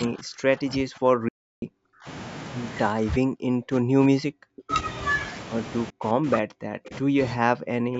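Speech runs through a call path here, and one problem is speech suppressed in double talk, heard in four stretches: 0.0 to 2.07 s, 2.92 to 4.71 s, 5.9 to 7.19 s, and 7.35 s to the end. In each, the talker's level sinks by roughly 40 dB at its deepest. That pattern likely comes from an echo canceller that, with both parties talking, could not tell near speech from loudspeaker echo and clamped everything down. On a waveform the envelope collapses to a thin trace in these spans; on a spectrogram the harmonic stack fades or drops out in patches. Inside the first stretch, from 1.28 to 1.62 s, the sound stops outright for about 335 ms. This is a playback stall, likely a player starved of data or held up on a blocked thread. It differs from the suppression because nothing at all remains: the waveform goes to a flat line and the spectrogram shows a clean vertical gap of true silence before the sound resumes. 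At 4.70 to 4.74 s, right where the second suppressed stretch ends, a brief echo leak appears. It is a faint delayed copy of the voice, lagging by about 394 ms and sitting about 20 dB below the speech. It likely got through because one side's echo canceller missed some of its loudspeaker pickup. On a spectrogram it shows as a weak smear of harmonics echoing earlier material.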